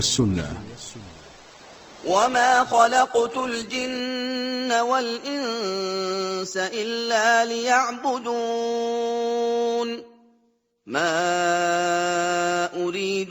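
The player began on a low-bitrate rendition of an adaptive stream, likely a lean Opus version, before switching up: from 0 to 4.0 s nothing above 8.2 kHz survives, then fuller treble returns abruptly without a gap. Throughout, sample clock jitter of roughly a microsecond or two mistimes samples, adding faint roughness, around 40 dB down, that grows on loud, bright passages.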